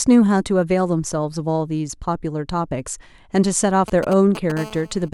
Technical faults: GSM signalling bursts; GSM phone buzz

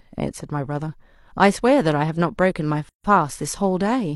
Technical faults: gap at a join of encoded pieces

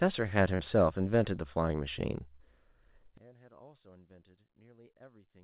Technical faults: burst of packet loss; one channel inverted

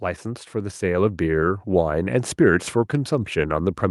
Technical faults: automatic gain rising

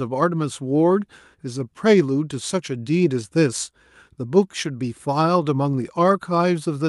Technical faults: none

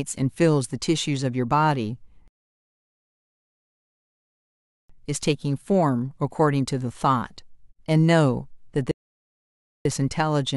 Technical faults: rebuffering stall

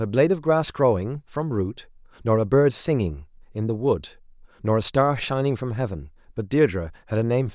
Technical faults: none

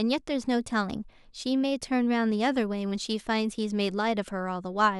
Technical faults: none

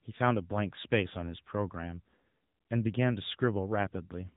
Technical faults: AMR narrowband mobile codec

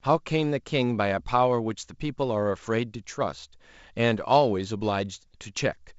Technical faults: none

